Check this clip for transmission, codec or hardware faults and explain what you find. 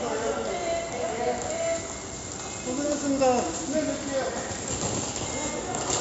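One codec fault runs through the whole clip. 4-bit ADPCM compression: coarse 4-bit prediction steps leave gritty hiss riding loud passages and roughen sharp attacks; nothing above 7.7 kHz, consistent with a 64 kbps stream.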